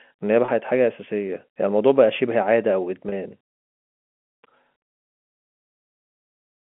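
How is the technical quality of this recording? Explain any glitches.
The recording has two short glitches, heard over a narrow 200 Hz to 3.4 kHz telephone band.

Packet loss with pitch repetition occurs at 0.45 to 0.48 s and 3.09 to 3.12 s. Each gap lasts 30 ms, which fits one lost packet. The receiver bridged it by looping the last pitch period, so the speech briefly holds with a slightly buzzy tone.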